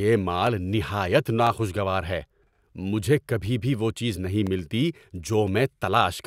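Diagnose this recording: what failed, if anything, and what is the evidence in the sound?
The fault sits in the driver or buffer stage: periodic USB or driver dropouts. Short ticks interrupt the speech once per second, from 0.47 s to 5.48 s. Each is a gap of about a millisecond, filled with silence. The spacing is exactly 1.0 s, so the timing is mechanical. Something on the host stalls the USB bus or the audio driver on a fixed schedule. The stream briefly starves and the hole clicks against the signal.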